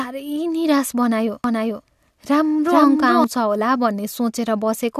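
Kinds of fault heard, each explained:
Doubled audio track: the speech was likely captured a second time through a slower path and mixed back in, so from 1.44 to 3.24 s a dry, full-band copy trails the original by roughly 0.4 s at about equal level, cutting in and out abruptly.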